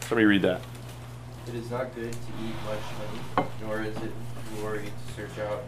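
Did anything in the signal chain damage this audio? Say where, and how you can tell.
Yes. A DC step starts at 2.09 s and lasts until 5.12 s. The waveform's zero line jumps to an offset of about -34 dBFS and stays there until it drops back at 5.12 s. Each jump is heard as a low thump or click, while the sound itself carries on unchanged. That points to the converter or analogue input stage, where a recalibration or a switched-in input with its own offset shifts the baseline.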